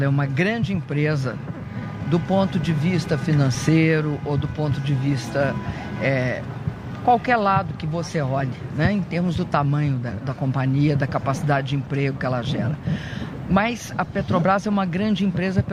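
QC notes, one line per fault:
No technical faults are present anywhere in the signal.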